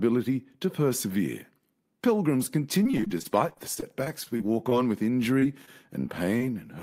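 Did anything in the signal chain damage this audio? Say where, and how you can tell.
Yes, at the network stage: repeated packet loss (robotic sound) in two stretches, from 2.83 to 4.73 s and from 5.39 to 6.57 s. The first holds about twenty short dropouts, each 31 ms or less. The second has a handful of dropouts, each up to 30 ms. Each hole is bridged by stretching the preceding sound, so the speech turns choppy, with pieces missing. On a spectrogram, the harmonics freeze into flat, smeared blocks with hard vertical seams. The waveform shows looped repeats and abrupt joins.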